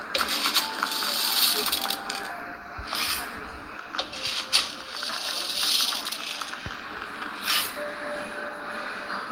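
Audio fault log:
The signal holds steady across the whole clip, with the level, timing and frequency content of the sounds all intact and nothing audible that departs from a normal recording chain.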